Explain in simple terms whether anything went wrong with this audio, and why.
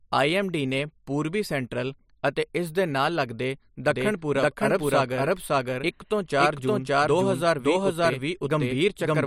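Something did go wrong. From 3.9 s, just after "ਇਸ ਦੇ ਨਾਲ ਲਗਦੇ", a doubled audio track appears: a second copy of the speech plays about half a second behind the first, at roughly the same loudness, and continues to the end. The copy comes in abruptly and sounds just as clean as the original, with no fade or room sound. The likely cause is the same signal being captured twice, once through a slower path.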